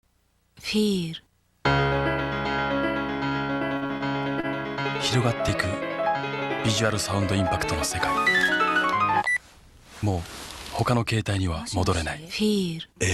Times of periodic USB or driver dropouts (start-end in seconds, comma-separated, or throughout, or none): none